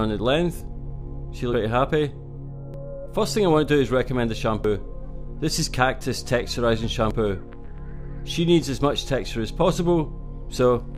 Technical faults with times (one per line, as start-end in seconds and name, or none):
0.60 dropped buffer (overrun)
1.53 dropped buffer (overrun)
2.74 dropped buffer (overrun)
4.64 dropped buffer (overrun)
7.11 dropped buffer (overrun)